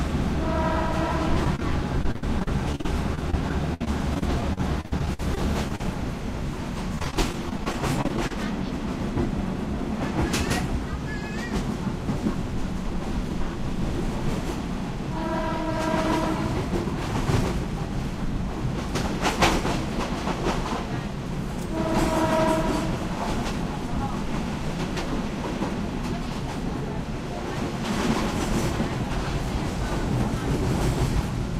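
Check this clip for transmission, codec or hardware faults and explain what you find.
Two kinds of network fault are audible, both early in the clip.

Short concealed packet loss occurs at 1.44 to 1.47 s, 1.56 to 1.60 s and 1.60 to 1.62 s. Brief holes were patched by extending the preceding sound, leaving quick smears or wobbles.

Repeated packet loss (robotic sound) runs from 2.03 to 5.88 s and again from 6.95 to 8.46 s. Gaps up to 67 ms recur constantly, each filled by continuation, so the sound turns choppy with pieces missing.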